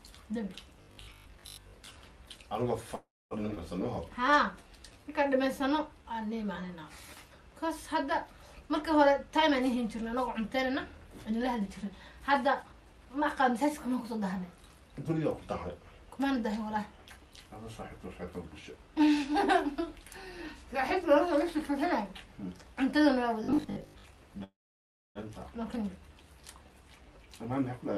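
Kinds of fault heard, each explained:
Robotic sound from repeated short buffers: New audio was likely reaching the player too seldom, so it kept replaying its last short buffer to cover the gaps while the real material was passed over. The 50 Hz buzz that results fits a 20 ms buffer being looped. From 0.82 to 1.96 s about half the sound is repeats, and from 23.44 to 24.04 s most of it is, giving a rigid metallic drone.
Call audio freeze: Packets were held up on the way and the jitter buffer ran dry, likely leaving the receiver nothing to play. It carried the last sound forward briefly and then fell silent. At 2.95 to 3.34 s this fills 354 ms, 230 ms of it silent. At 24.44 to 25.18 s it fills 716 ms, 620 ms of it silent. Each time playback resumes where it stopped, with nothing lost.
Skip ahead: A stretch of audio was discarded while later audio was already queued, so playback jumped straight to the newer material. 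At 3.55 to 3.59 s roughly a fifth of a second goes missing, bridged by only 13 ms of fill. At 25.75 to 25.78 s a similar amount vanishes with no fill at all, so the two sides butt directly together and the sound lurches forward.
Jitter buffer slow-down: The jitter buffer was running short, so the receiver built a reserve by repeating single pitch periods and small slices of pauses many times over. From 4.21 to 6.14 s this adds 168 ms, and the sound plays at 92% of its normal speed with its pitch unchanged. Sustained parts are stretched out, and the passage drags slightly compared with what surrounds it.
Jitter buffer speed-up: The jitter buffer held more audio than its target, so the receiver trimmed short pieces of one or a few pitch periods in quick succession to bring the delay down. From 9.28 to 13.07 s playback runs at 109%, shedding roughly 400 ms. From 26.69 to 27.63 s it runs at 113%, losing about 150 ms. 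Pitch stays the same while the sound feels hurried.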